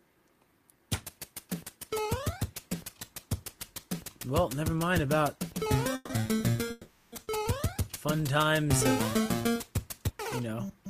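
Call audio freezes at 5.95–6.11 s and 6.71–7.14 s stretch the last sound into a fading buzz or hiss for 140 and 410 ms, then resume intact, likely from delayed packets draining the jitter buffer. At 7.24–7.29 s, a short stall from a late packet holds a sound 30 ms too long with a slight buzz or dip before continuing, nothing lost.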